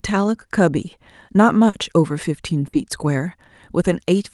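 At 1.69 to 1.75 s there is a short concealed packet loss: about 40 ms of the call never reached the decoder in time, so the receiver stretched the preceding speech across the hole and blended back, leaving a brief smear where a short sound can go missing.

At 2.67 to 2.75 s a burst of packet loss follows. About 60 ms arrived too late or not at all, and the receiver carried the last sound forward while fading it, so a held buzz or dying hiss replaces that stretch before speech resumes further on.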